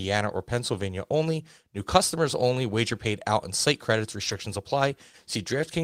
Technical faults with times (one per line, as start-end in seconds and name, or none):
4.27-4.33 lost packet rebuilt from error correction